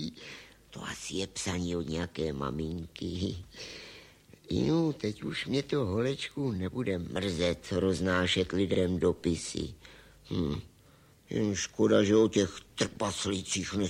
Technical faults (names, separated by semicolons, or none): overlapping chunks